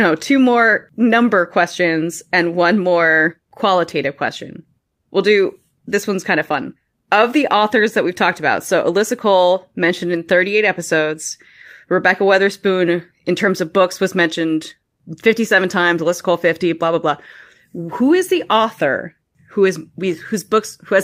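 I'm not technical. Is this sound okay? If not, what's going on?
Yes, this recording sounds fine; nothing wrong stands out.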